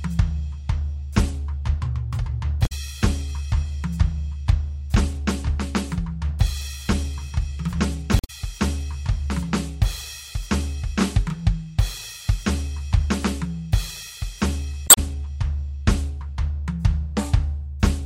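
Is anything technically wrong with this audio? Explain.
Yes, the music has damaged data in a compressed stream at 2.63–2.72 s, 8.17–8.30 s and 14.84–14.98 s. Corrupted frames make the decoder lose sync, leaving brief glitches where frames are misread or skipped.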